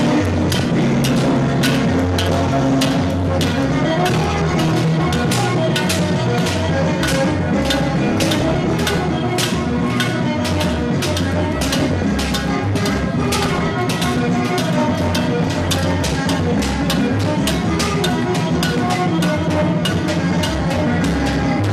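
MP2 compression runs through the whole clip: a dull top end, flickering upper bands and a plainly audible gurgling, granular grain. These likely come from MPEG Layer II coding at a low rate, around 80 kbps, which leaves the upper sub-bands short of bits.

DAB burbling follows at 0.34–0.74, 4.36–4.77, 8.09–9.05, 11.44–12.14, 13.40–13.70 and 15.43–15.77 s. Bit errors of roughly 0.4 percent to one percent slip past the error correction into the MP2 sub-band data, bubbling up as short blips of noise in single sub-bands.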